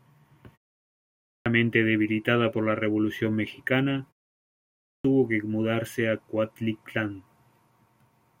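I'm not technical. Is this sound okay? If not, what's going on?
No. There is a clipped start after a pause: after brief silences, the playback device dozes and wakes late, so speech resumes abruptly with its opening cut. About half a second goes missing at 0.92 to 1.46 s, before "debilitada por la", and about 0.6 s at 4.44 to 5.05 s, before "que mudarse a". Unlike pauses that simply go quiet, actual speech is lost here.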